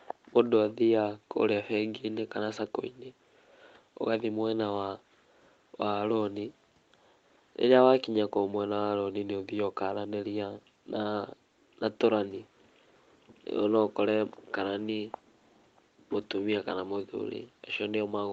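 Nothing stood out on listening to this speech.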